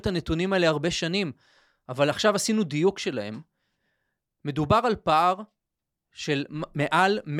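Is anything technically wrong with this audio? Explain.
No, nothing in this speech recording stood out as a technical problem on listening.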